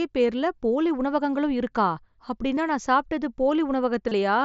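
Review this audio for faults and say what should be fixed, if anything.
A brief buzzy, held tone replaces the audio twice: a 15 ms blip at 2.56 s, just before "நான் சாப்பிட்டது", and a longer 30 ms stretch from 4.08 to 4.12 s that ends with a slight warble as real audio resumes. This is concealed Bluetooth headset packet loss. Voice packets between the headset and the phone were lost, and the receiver filled each gap by repeating the best-matching recent slice of waveform at full level. The gap lengths fit two and four lost 7.5 ms mSBC frames, with the mSBC wideband codec itself carrying the rest of the audio. To prevent it, keep the headset close to the phone with a clear line of sight and reduce 2.4 GHz interference from Wi-Fi and other Bluetooth links.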